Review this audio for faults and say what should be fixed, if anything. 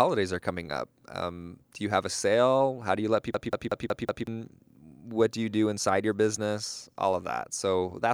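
A system hang loop runs from 3.34 to 4.27 s, just after "do you let." The host froze while the sound hardware kept cycling its ring buffer, so a 0.19 s slice repeats five times at 5.4 Hz. The result is a machine-gun stutter, which fits an 8192-sample buffer, and about a second of speech is lost. To prevent it, keep the driver and host responsive, and add a watchdog that mutes or resets playback when the buffer stops being refilled.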